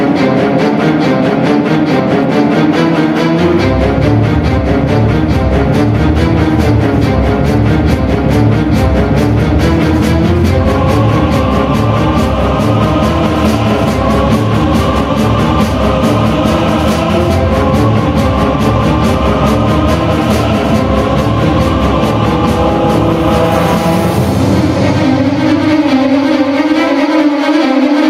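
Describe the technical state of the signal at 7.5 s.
At 7.5 s the gain pumping heard throughout the clip is present: the input gain is likely set far too high, so a fast limiter pulls the level down on each loud sound, swinging it by around 10 dB. Loud and soft parts sit closer in level, leaving a squashed sound.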